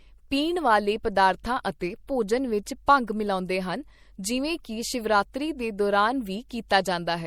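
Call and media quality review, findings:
MP3 compression, throughout. Watery, swirly speech; smeared consonant onsets; metallic chirp on s sounds. Likely cause: MP3 encoder starved of bits, damage fits 64 kbps. Spectrogram: speckled blocks where weak frequency lines switch off between frames.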